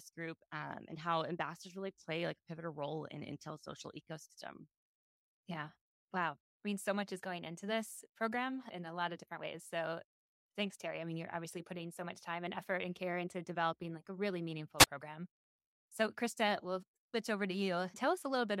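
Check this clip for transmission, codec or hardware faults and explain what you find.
One fault stands out. At 14.78 to 14.87 s there is a wireless microphone squelch dropout. The radio link fades, so the receiver mutes the speech for about 27 ms.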